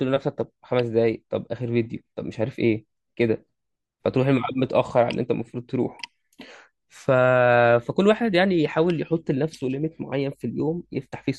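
No technical faults can be heard anywhere in the speech recording, and the signal stays intact and steady throughout.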